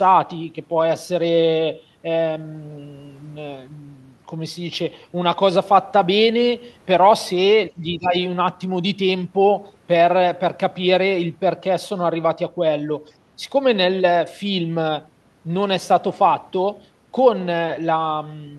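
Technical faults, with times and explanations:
7.70–8.14 s: speech suppressed in double talk. The speech level dips sharply, by about 20 dB at its deepest, for around 0.4 s. With both ends talking at once, the echo canceller likely could not separate this talker from loudspeaker echo and turned both down.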